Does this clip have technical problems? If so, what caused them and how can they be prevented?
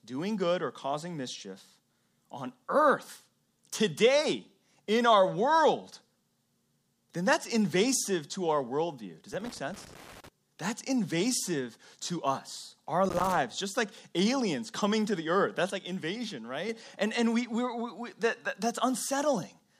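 Yes. Loose connector crackle appears from 9.34 to 10.28 s and again from 13.05 to 13.37 s, between "invasive to us our" and "just like aliens coming". A dirty or worn contact rapidly broke and remade the circuit, chopping the signal into irregular scratchy bursts. On a waveform these show as jagged spikes and dropouts. On a spectrogram they appear as scattered broadband vertical streaks. Cleaning or replacing the connector and securing the cable against movement prevents this.

A sudden gain jump runs from 15.70 to 16.69 s. The speech and the background noise drop together by about 6 dB at once and come back up at the end. The likely cause is a digital gain change applied between adjacent samples without any ramp. The waveform envelope shows a clean step down and a step back up. The spectrogram shows the whole band dimming abruptly at both edges. Applying gain changes with short fades avoids the step.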